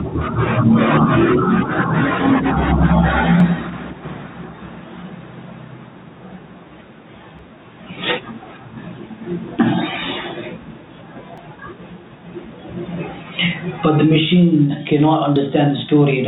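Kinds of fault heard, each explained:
Gain pumping: Loud and soft parts sit closer in level and the sound is squashed, a swing of about 25 dB. Likely too much gain driving a fast limiter.
Audio missing between chunks: Brief skips at 3.40, 7.39, 11.38 and 15.36 s, about every 4 s, each dropping roughly 15 ms. This likely comes from chunked processing losing audio at each boundary.
Phantom power thump: A deep thump at 14.93 s dies away in about 28 ms. A supply switched on a live input sends a step through the coupling capacitors.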